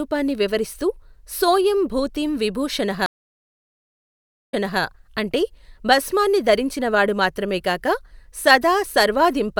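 At 3.06 s the speech cuts to 1.43 s of silence, then at 4.80 s resumes 312 ms behind where it stopped, so that moment repeats. This stream reconnect came from a dropped connection: the player restarted its decoder mid-stream and the server resent earlier audio.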